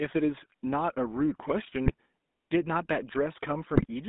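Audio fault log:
Throughout: GSM full-rate codec. The speech passes through a narrow band of about 200 Hz to 3.7 kHz, with nothing above. The codec rebuilds speech from a vocal-tract model driven by a sparse, regular pulse excitation. That leaves a plainly audible buzzy, gravelly roughness, which fits a 13 kbps GSM full-rate channel.
1.86–1.94 s and 3.76–3.86 s: GSM bit errors. The speech breaks into brief squawks and gargling bursts, each under a tenth of a second. Corrupted filter, pitch or gain values reach the decoder. Each affected frame gets a warped spectrum or a level jump, consistent with a weak radio link.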